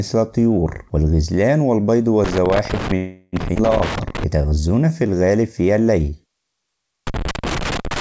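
Loose connector crackle runs from 2.24 to 4.24 s. A worn or dirty contact keeps making and breaking as it shifts, chopping the signal into an irregular scratchy burst.

Within that stretch, a call audio freeze fills 2.96 to 3.36 s. The last sound is drawn out as a fading buzz for about 366 ms, likely because packets stalled and the jitter buffer ran dry. The audio then resumes where it stopped, with nothing lost, just delayed.

Jitter buffer slow-down follows from 4.37 to 5.33 s. The receiver repeats tiny pitch-period slices to rebuild its reserve, so the sound plays at 83% speed without changing pitch and gains 176 ms.

Loose connector crackle returns at 7.07 s and lasts to the end, another irregular scratching burst from the intermittent contact.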